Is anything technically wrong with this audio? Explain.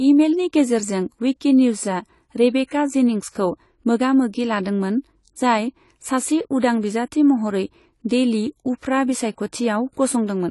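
Yes. Throughout, the speech carries AAC compression damage, most likely from AAC-LC at a low bitrate; the texture points to something around 32 kbps. With so few bits per frame, the encoder discarded the top of the spectrum entirely, so nothing remains above 11.5 kHz, and it quantised the remaining bands coarsely. The result is plainly audible: the voice sounds dull and smeared, with a warbling, fizzy texture on sustained vowels and sibilants.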